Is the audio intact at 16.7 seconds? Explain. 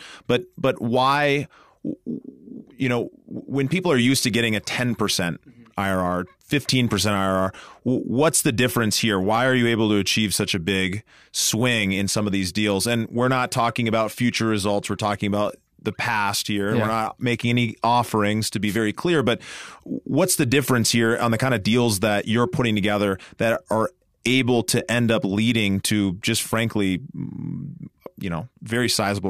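Yes, the speech at 16.7 seconds plays through cleanly, with no dropout, click, distortion or other audible fault at that moment.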